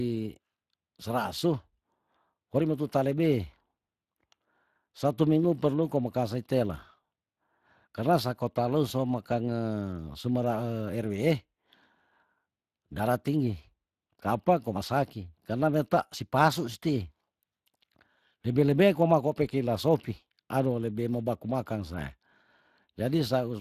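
From start to finish the speech passes through the Speex codec, a CELP coder that models each short frame with a filter and a coded excitation. The plainly audible damage points to a bitrate of around 22 kbps. The excitation is coarsely coded, so the voice takes on a noisy, hoarse texture in place of a clean one. Nothing is present above 15.3 kHz.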